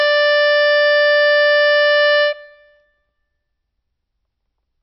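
From start to finish the music is dull, with nothing above about 5.6 kHz, and it has a watery, swirling shimmer where faint detail flickers in and out. That's most likely MP3 compression, starved enough to suggest a bitrate around 24 kbps.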